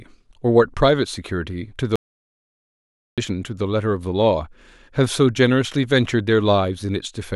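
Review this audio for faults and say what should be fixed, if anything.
An audio dropout to silence runs from 1.96 to 3.18 s in this speech. About 1.22 s is lost. The gap is silent, with no room tone. The input was likely cut by a disconnected link or stray mute. Prevention: secure cables and monitor inputs live.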